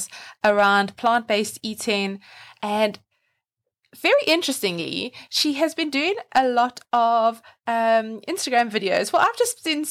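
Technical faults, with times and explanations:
0.45–1.07 s, 4.06–4.35 s, 6.36–7.27 s, 8.57–8.61 s and 8.97–9.26 s, hard clipping: the speech is pushed about 2 to 6 dB past the ceiling, so peaks get sliced flat and crackle with harsh added harmonics.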